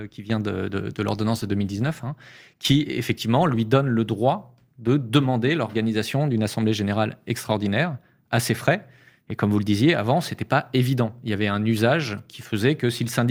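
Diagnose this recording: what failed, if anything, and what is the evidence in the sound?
Right after "y avait un", from 11.94 to 13.14 s, there's a galloping dit-dit-dit of short buzzes at 217 Hz, sitting roughly 30 dB under the speech. That's GSM signalling bursts: a nearby 2G phone's radio bursts get rectified somewhere in the analogue wiring.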